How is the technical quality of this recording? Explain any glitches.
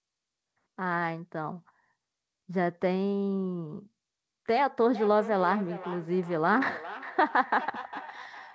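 The clip has one clear fault, a feedback echo between two devices, running from 4.95 s to the end. Two devices in the same room were on the call: one played back what the other's microphone sent, that microphone picked it up again, and each device's echo canceller removes only its own playback. Speech returns roughly every 0.4 s, thinner and more ringing, peaking at about 14 dB below the direct speech. On a spectrogram, fainter copies of each speech pattern trail it at regular intervals, while the G.722 call path shows nothing above 8 kHz.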